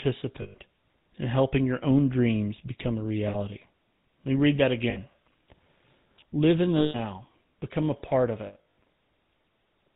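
Throughout the speech, the GSM full-rate codec is plainly audible. Its buzzy, gravelly texture and the absence of anything above 4 kHz point to 13 kbps full-rate coding. The codec rebuilds the voice from a vocal-tract model excited by a coarse, regularly spaced pulse train, and that pulse train produces the roughness. Simple band-limiting would only sound muffled, while this grain sits inside the voice itself.

Lost GSM frames interrupt the audio five times. The first runs from 0.42 to 0.55 s, about 120 ms. The next two are 60 ms gaps: one at 3.28 to 3.36 s, right after "own dreams become a", and one at 4.9 to 4.98 s, after "me read that". A longer loss of 160 ms follows at 6.78 to 6.96 s. The last comes after "become a part of", where losses are scattered between 8.46 and 8.79 s, with the longest run around 100 ms. In each case the decoder repeats the last good frame. The result is a rough, metallic ring that holds, unlike a dropout's abrupt silence or a click.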